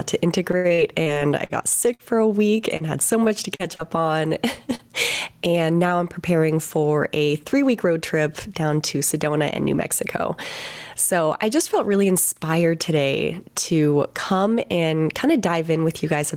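A speech recording with gain pumping throughout: the level is pulled down under each louder sound, a swing of around 10 dB. That points to a likely cause of input gain set far too high with a fast limiter or compressor clamping it back. Unlike a simple noisy line, the level is pushed around by the talker, and soft and loud passages sit squashed close together.

From 0.51 to 2.02 s there is repeated packet loss with robotic sound. Nine separate holes are patched by extending the preceding sound, about a fifth of that stretch is synthetic, and roughly 200 ms of real audio is gone, the longest gap 72 ms. What separates it from isolated losses is the density: one patch barely recovers before the next arrives, so the speech turns choppy rather than briefly smeared.

Single short concealed packet losses occur at 2.77 s just before "had so", then at 3.55, 3.75 and 4.75 s. Each drops about 40 ms, filled with 32 to 44 ms of continued sound, and is heard as a quick smear or wobble where a consonant can disappear.

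At 3.24 to 3.29 s, just after "had so", comes a short stall from a late packet. Nothing is lost. The sound is held about 14 ms too long while the buffer waits, giving a slight drawn-out buzz rather than a missing piece, which is what distinguishes it from the losses around it.

Between "and now I'm preparing" and "trip down to", 7.00 to 7.86 s, a jitter buffer speed-up trims roughly 40 ms of pitch periods to shed excess delay. Delivery runs about 4% fast at unchanged pitch, without any chipmunk shift, unlike a resampling error.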